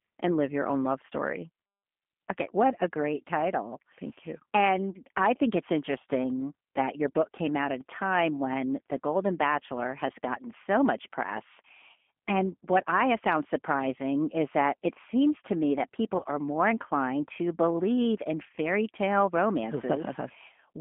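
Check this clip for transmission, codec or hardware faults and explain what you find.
Two faults are audible: codec coloring throughout the clip and one brief dropout.

Throughout the clip, the speech sounds rough, slightly synthetic and confined to about 200 Hz to 3.4 kHz. This is G.729 codec damage: the decoder rebuilds speech from a vocal tract model at what fits 8 kbit/s.

From 16.17 to 16.25 s, between "seems to me that" and "are more inclined to", the voice is stretched into a buzzy tone or coloured noise that fades. This is VoIP packet loss concealed by the speech codec. About 40 ms of audio, consistent with two lost packets, was replaced by extrapolating the last pitch and filter.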